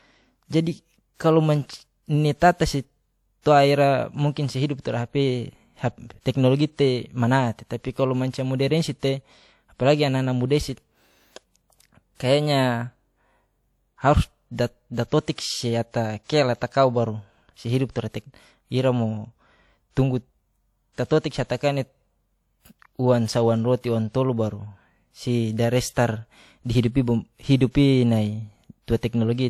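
Right from the start and all the way through this speech clip, there's a layered coding texture that sounds like transcoding between lossy codecs: likely an HE-AAC encode at around 48 kbit/s later re-encoded to WMA at about 64 kbit/s. The second encoder wastes bits chasing the first one's artefacts and adds its own, so you hear both flavours of grit stacked together. Content stops at about 20.1 kHz.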